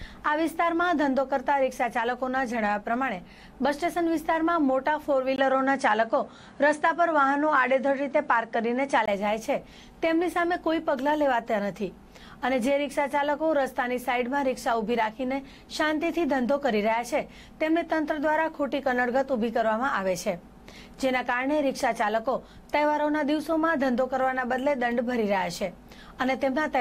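An input switched to a poorer device, likely, at 5.36 s, when a 20 ms gap opens, and the sound then loses everything above 10.5 kHz, shifts a few decibels in level and gains a faint new noise floor before recovering at 9.08 s.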